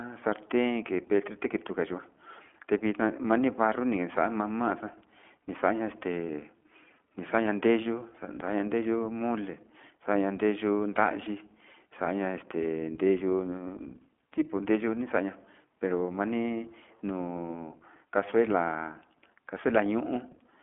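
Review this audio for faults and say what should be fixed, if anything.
The whole recording has been through the iLBC codec, and the damage is plainly audible. The speech is confined to a telephone band of roughly 200 Hz to 3.4 kHz, with nothing above 4 kHz. It has a slightly rough, synthetic edge because each 20 ms frame's excitation is coded on its own. That frame length points to iLBC's 15.2 kbps mode. Plain band-limiting alone would sound dull but smooth, without this grainy texture. To prevent it, record or route the call through a wideband codec such as Opus rather than iLBC.

From 11.24 to 11.28 s there are lost iLBC frames: one 20 ms frame went missing. The decoder concealed it by repeating the last pitch cycle with some added noise, so the gap sounds like a briefly held, faintly buzzy vowel rather than silence. This differs from a dropout, which would leave a hole, and from lost frames in codecs that depend on earlier frames. 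Because iLBC frames stand alone, the speech recovers cleanly right after. To prevent it, reduce packet loss on the network path or add a jitter buffer with forward error correction.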